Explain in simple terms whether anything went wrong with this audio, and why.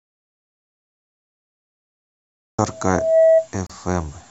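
Three things go wrong in this speech recording.

First, an audio dropout to silence: from the very start until 2.59 s there is nothing at all, not even the faint hiss of a room. That total blankness is the clue. A quiet pause would still carry some background sound, so this points to the input being lost, likely from a disconnected or muted microphone, while the recorder kept writing empty audio.

Second, a loudspeaker feedback squeal from 2.69 s to 3.49 s. A single steady tone at 650 Hz swells up over about half a second until it sits well above the speech. It grows on its own because the microphone is hearing the loudspeaker it feeds, so the sound keeps looping and building. That slow swell on one pitch sets it apart from a sudden click or a burst of noise.

Third, a gap at a join of encoded pieces: at 3.67 s the speech breaks for about 32 milliseconds, then carries straight on from where it left off. 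This happens when separately encoded chunks are stuck together without trimming the short padding each one carries. Unlike the dropout, it is a brief blip rather than a long loss, and no sound goes missing.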